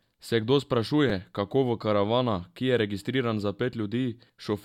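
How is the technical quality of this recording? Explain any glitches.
The recording has two brief playback glitches, both repeated buffers. At 1.10 s, just before "kako v karavana ki", and at 2.57 s, between "kako v karavana" and "ki je registriran za", late audio made the device replay its last 5 ms buffer, twice and once respectively. Each hard-joined repeat is heard as a click or tiny buzz rather than a stutter, with no audio missing.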